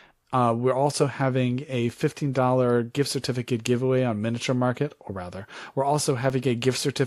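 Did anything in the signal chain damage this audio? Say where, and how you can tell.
Yes. Two blocks of digital silence, from the driver or buffer stage. Each is about 2.9 ms long. The first is at 0.92 s, just before "having a". The second is at 6.30 s, just after "or rather we're". Each is heard as a tick or dip. The speech drops out and back with no fade. The identical short length fits a 128-sample buffer that was not filled in time.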